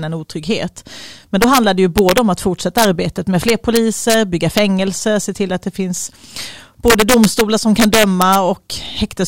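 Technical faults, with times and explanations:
1.42–1.58, 1.98–2.18, 2.78–2.85, 3.49–4.14, 4.58, 6.88–7.41 and 7.80–8.35 s, integer overflow: speech peaks only about 1 dB over full scale (about 2 dB at 6.88 s) wrap to the opposite sign instead of being limited, producing violent cracks far harsher than clipping's flattened buzz.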